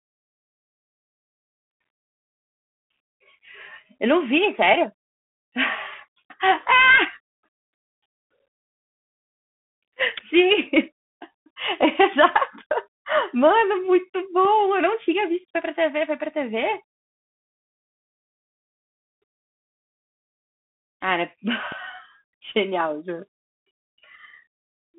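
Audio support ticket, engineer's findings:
Bluetooth CVSD headset codec, throughout. Narrowband speech, band roughly 150 Hz to 3.5 kHz, nothing above 3.8 kHz. Plainly audible slope-overload distortion on loud high content, scratchy sibilants, granular hiss underneath. Headset link, one-bit delta stream consistent with 64 kbit/s.

DC step at 21.72 s. Low thump as the waveform's zero line jumps, speech continuing unaffected. Offset then decays, consistent with a high-pass around 5 Hz. Probable converter recalibration or an offset input switching in.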